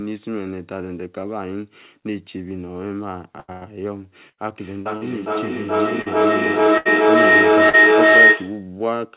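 Burst packet loss hits at 3.40–3.51 s, 3.52–3.64 s and 4.29–4.40 s. Each drops about 80 ms of speech, bridged by a held, fading continuation of the last sound before the audio resumes further on. From 4.57 to 8.77 s a feedback howl builds near 2 kHz, with the loop repeating roughly every 0.4 s and peaking about 15 dB above the speech. Within it, short concealed packet loss at 4.81, 4.97 and 6.01 s each fills about 40 ms with a brief synthesized smear. Another burst at 6.78–6.88 s loses about 80 ms. A final short concealed loss follows at 7.69 s.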